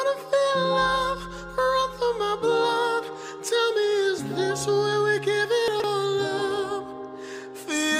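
At 5.68 s the sound briefly turns jumbled, a short scrambled stretch running to 5.84 s. These are chunks out of order: the audio moves in 40 ms blocks, and one block was delivered or written three blocks late, so it plays after material that should have followed it. Nothing is missing, but the misplaced block creates three abrupt joins.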